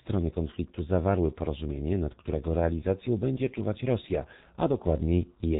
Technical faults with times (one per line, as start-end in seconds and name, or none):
0.00-5.59 G.723.1 codec